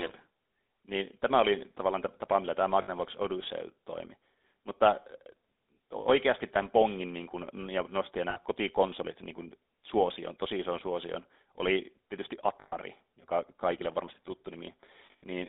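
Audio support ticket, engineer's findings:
GSM full-rate codec, whole clip: buzzy, gravelly speech, audible throughout, band roughly 250 Hz to 3.7 kHz. The pulse-train excitation only keeps a third of the samples. The sound fits a 13 kbps full-rate link. Worth checking the transcoding leg.

Lost GSM frames at 2.82–2.90 s and 8.30–8.39 s (60 ms each), at 12.61–12.74 s (120 ms), and at 15.06–15.23 s (140 ms in total). Each gap gives a short rough, metallic ring. The decoder repeats the last good frame. The last hit is scattered over about 220 ms, with its longest run about a tenth of a second. Probable cause is radio or transport loss.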